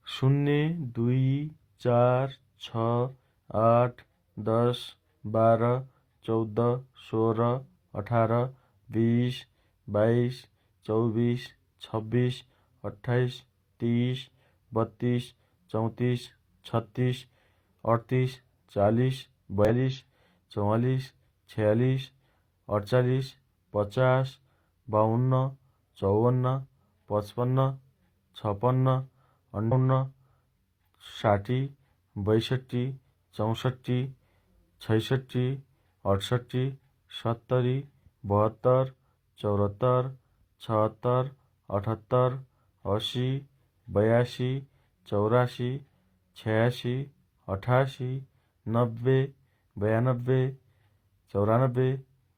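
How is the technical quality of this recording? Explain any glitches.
Two short glitches, both from damaged data in a compressed stream. At 19.65 to 19.69 s, right after "अठतिस चालिस", and again at 29.68 to 29.73 s, the decoder hits corrupted frames, loses sync and hunts for the next header, so you get a quick chirp, squawk, click or short hole.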